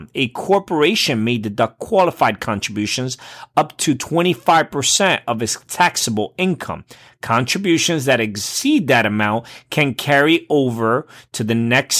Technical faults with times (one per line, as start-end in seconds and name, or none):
none